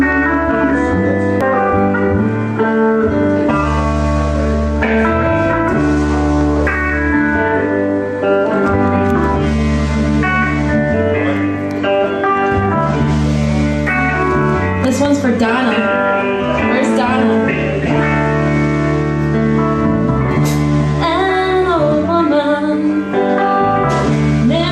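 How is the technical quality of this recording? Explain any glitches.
The recording has three brief technical faults: one data error and two pops.

At 1.41 s there is damaged data in a compressed stream. Corrupted bytes in the encoded audio make the decoder misread a frame, lose sync and hunt for the next valid header. The result is a short glitch, such as a chirp, squawk, click or hole.

Two loud pops occur, from 6.41 to 6.44 s and from 15.05 to 15.08 s. Each is a single sharp pop above the sound, which continues underneath. The first peaks at about 5 dB above the signal level and the second at about 10 dB. The likely cause is a sudden voltage step or pulse, such as from a switch, connector or static discharge, shaped by the downstream circuitry.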